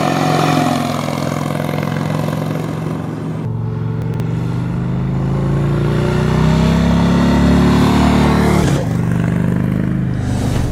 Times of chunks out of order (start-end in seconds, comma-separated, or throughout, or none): 4.02-4.20, 8.64-8.76